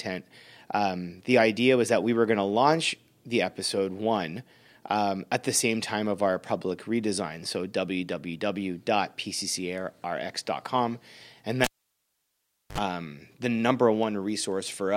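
At 11.64 s a live cable is pulled and plugged in: the connection breaks with a pop, leaving near silence for about 1.09 s, then a 56 ms burst of 50 Hz mains buzz as the tip touches, and a second pop at 12.78 s before "um the number".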